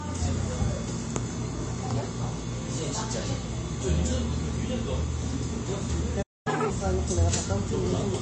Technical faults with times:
0.00-8.21 MP3 compression
6.22-6.47 playback stall
6.47-6.70 catch-up at higher speed

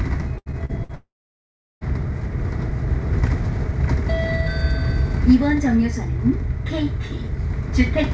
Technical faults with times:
0.38-0.92 repeated packet loss (robotic sound)
0.95-1.84 long network dropout

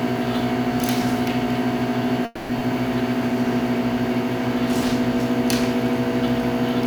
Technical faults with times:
2.25-2.51 call audio freeze
2.59-2.62 skip ahead

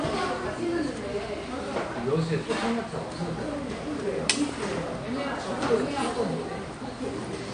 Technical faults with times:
0.00-7.53 AAC compression

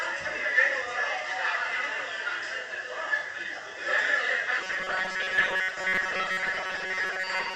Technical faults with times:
4.61-7.56 robotic sound from repeated short buffers

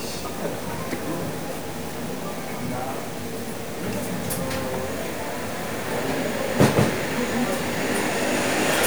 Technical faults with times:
0.00-8.87 low bit depth without dither

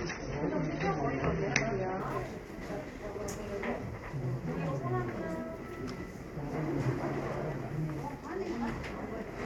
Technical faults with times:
0.00-2.00 adaptive stream starting at a low bitrate
2.13-9.22 clock drift buffer slips

